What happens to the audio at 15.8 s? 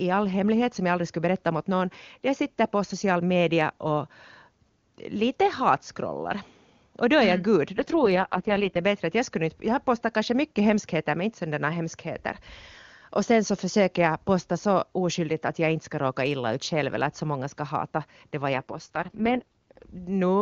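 Nothing goes wrong at 15.8 s: the speech carries on intact through that moment, coded as HD Voice (AMR-WB) at a high rate consistent with 23.85 kbit/s, where any codec damage is faint at most.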